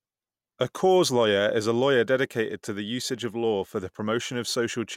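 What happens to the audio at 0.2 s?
Nothing goes wrong at 0.2 s; the speech plays through that moment intact, with no dropout, click, distortion or other fault.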